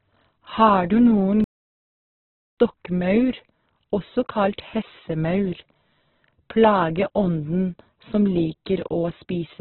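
Right from the start the speech is muffled and grainy, with nothing above about 4 kHz. That's likely heavy Opus compression at a very low bitrate, around 8 kbps. Then from 1.44 to 2.58 s there's a playback stall: the sound just drops out for about 1.13 s, likely because the player ran dry, and then it carries on.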